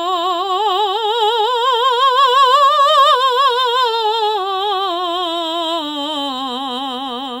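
Across the whole of the music there is sample clock jitter: the converter's clock wavers, so each sample lands a little early or late, by something on the order of a microsecond or two. Because the timing error bites hardest where the waveform changes fastest, a grainy hiss rides on loud, bright passages, sitting roughly 35 dB under the music. On a spectrogram this appears as a diffuse noise haze, densest in the upper bands during loud moments.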